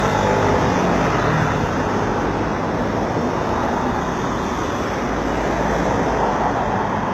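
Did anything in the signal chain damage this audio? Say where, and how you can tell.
Yes. At the codec stage, nothing exists above 12.3 kHz for the whole clip. A spectrogram shows a hard ceiling there, likely low-bitrate audio saved at a high bitrate.

At the converter clock stage, faint regular ticks run from 0.14 s to 7.12 s, about every 40 ms. These are likely clock slip clicks, with one sample dropped or repeated each time, which fits roughly 500 ppm of clock mismatch. On the waveform they look like tiny single-sample steps.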